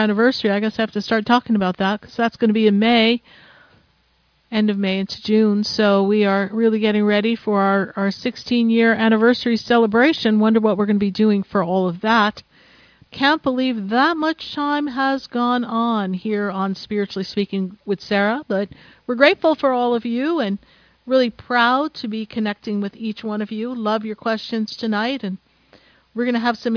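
Nothing in the audio stood out as a technical problem on listening.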